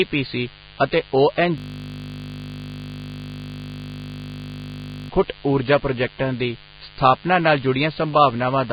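A steady, raspy buzz sits under the speech for the whole clip, roughly 25 dB below it. This is mains buzz: switching spikes from the 50 Hz supply have leaked into the signal path, bringing a dense ladder of harmonics that reach well into the treble.

Throughout, the speech also sounds hissy and grainy, with roughened tones, smeared consonant attacks and nothing above about 4.9 kHz. The likely cause is heavy Vorbis compression at a very low bitrate, which fits something around 16 kbps. At that rate the fine treble detail is replaced by noise of similar energy.

From 1.58 s to 5.1 s the speech gives way to a continuous, even buzz at 50 Hz. This is a system hang loop. The machine stalled while the audio hardware kept replaying the same 20 ms buffer, repeating it over and over for about three and a half seconds.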